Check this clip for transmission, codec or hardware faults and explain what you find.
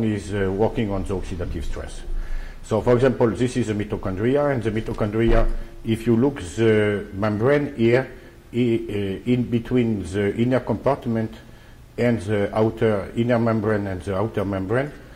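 One hardware fault stands out: a short burst of loose connector crackle from 4.86 to 4.96 s, lasting about a tenth of a second. A worn or dirty contact is briefly making and breaking, chopping the signal on and off, and any DC on the line turns each break into a pop. It sounds like an irregular scratchy crackle. On a waveform it shows as jagged dropouts and spikes; on a spectrogram, as scattered broadband vertical streaks.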